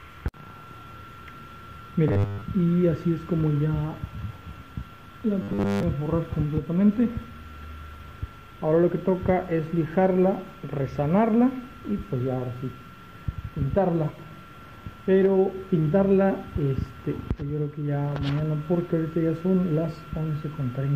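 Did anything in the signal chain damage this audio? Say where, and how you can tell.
Yes, robotic sound from repeated short buffers at 2.08–2.43 s and 5.42–5.83 s: a fixed 100 Hz buzz, likely from repeated 10 ms buffers, not dropout silence.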